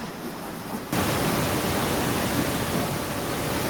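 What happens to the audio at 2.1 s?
Nothing goes wrong at 2.1 s: the speech is intact, with only the room's own background noise audible about 13 dB beneath it.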